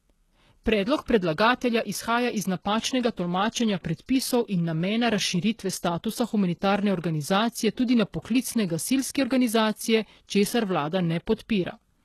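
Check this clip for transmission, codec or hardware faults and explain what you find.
One codec fault runs through the whole speech clip. Sibilants sound gritty and lispy, and nothing sits above 12.3 kHz. That is likely HE-AAC compression at a very low bitrate, whose spectral band replication copies lower bands upward into treble that never matches the original.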